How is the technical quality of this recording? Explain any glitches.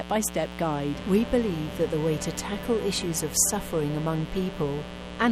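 The recording is marred by a mains buzz that runs through the whole clip. It sits only about 10 dB below the sound itself, loud enough to be obvious throughout.

From start to finish, sharp switching spikes from a dimmer, rectifier or unshielded lead are entering twice per 60 Hz cycle, so 120 times a second. This produces a raspy, steady buzz. A spectrogram would show evenly spaced horizontal lines at 60 Hz multiples reaching several kHz, and the waveform would show a regular comb of spikes.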